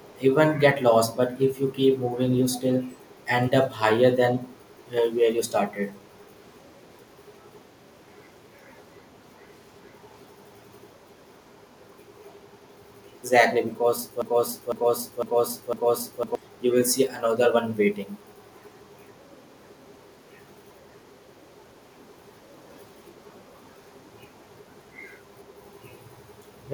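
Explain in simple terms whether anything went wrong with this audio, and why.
Echo leak at 0.0 to 0.2, 2.51 to 2.61 and 2.9 to 3.19 seconds: a faint, delayed copy of the speech trails it by about 0.4 seconds. Someone was likely using a loudspeaker, and their echo canceller let some of it slip back down the line.

Broken-record loop from 14.22 to 16.35 seconds: a half-second snippet plays four times in a row, and whatever should have come next is lost. The player or stream likely stalled and kept replaying the last piece it held.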